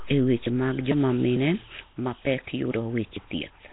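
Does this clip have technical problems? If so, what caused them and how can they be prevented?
Yes. Nellymoser compression is heard throughout the speech: a rough, hissy, underwater smear with nothing above 3.8 kHz. The damage is heavy, which fits a 16 kbps stream. The likely cause is Flash's Nellymoser Asao codec, which spends a fixed two bits per sample on 256-sample blocks and fills bands that get no bits with noise. To prevent it, record or transmit with a modern codec at a higher bitrate, or uncompressed.

Audio missing between chunks occurs at 0.47, 0.92, 1.37, 1.82, 2.27, 2.72 and 3.17 s. At each point around 50 ms of speech vanishes, and the two sides are butted together with no gap. The steady spacing likely comes from a recorder working in 0.5 s chunks and losing audio at each handover. To prevent it, use a recorder that writes continuously or overlaps its buffers so that no samples are dropped between chunks.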